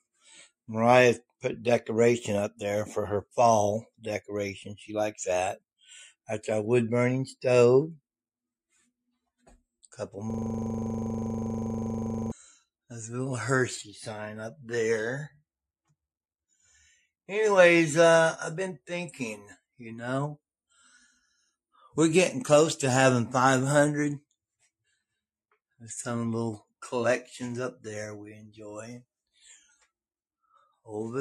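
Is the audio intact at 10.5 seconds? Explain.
No. A system hang loop runs from 10.30 to 12.32 s, so 10.5 s falls inside it. The computer or audio driver stalled while the playback hardware kept reading the same small stretch of its ring buffer, which here is 40 ms long. That single fragment repeats exactly, about 50 times at 25 per second, turning the sound into a rigid, mechanical rattle that sits on the edge of a low buzz until normal playback returns.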